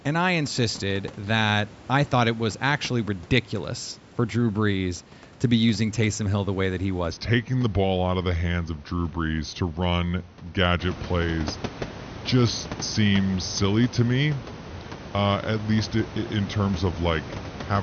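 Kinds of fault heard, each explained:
Section at the wrong speed: from 7.11 s to the end, the speech plays at about 0.84 times its proper rate, so it drags and drops roughly three semitones, likely from resampling against the wrong clock. Because tempo and pitch fall together and at once, it differs from a pitch shift or time stretch that alters only one.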